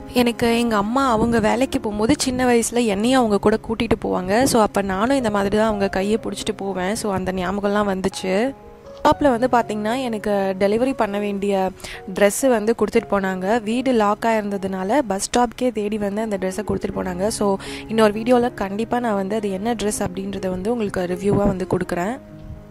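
No technical faults can be heard anywhere in this audio.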